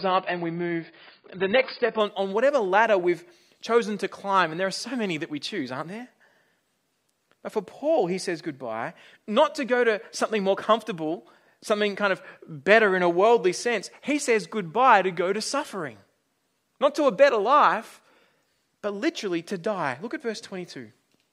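For the first 2.0 s the speech sounds dull and smeared, nothing above about 5 kHz, then quality jumps without a gap before "on on whatever ladder": an adaptive stream starting at a low bitrate.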